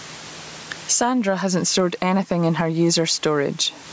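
A speech recording with gain pumping all the way through. The swing is large, around 20 dB. Loud and soft passages sit too close in level, so the sound feels squashed. The likely cause is input gain set far too high, with a fast limiter or compressor clamping it down on each peak. The room noise sits about 36 dB below the speech, and the call processing leaves nothing above 8 kHz.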